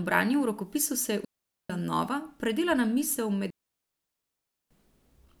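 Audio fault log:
1.25–1.70 s and 3.50–4.71 s, digital wireless dropout: the speech cuts to near silence for about 0.45 s and then 1.2 s as the receiver mutes a corrupted radio link with a very quick fade. There is no noise burst at either edge. The waveform shows flat gaps and the spectrogram shows blank vertical bands.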